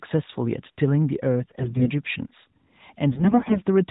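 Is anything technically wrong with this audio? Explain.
Yes. From 1.42 to 1.91 s and again from 3.12 to 3.63 s the speech turns hoarse, scratchy and gargly while keeping its pitch and level. These are AMR bit errors. Unprotected bits in the narrowband mobile codec frames arrived flipped, roughly one in ten in the first burst and more in the second. That misplaced the excitation pulses and skewed the fine pitch, gain and spectral values.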